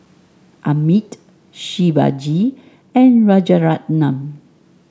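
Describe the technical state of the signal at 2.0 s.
At 2.0 s the speech is intact, with no dropout, distortion or other fault, only the normal band limiting of call microphone processing, which leaves nothing above 8 kHz and trims the lowest bass.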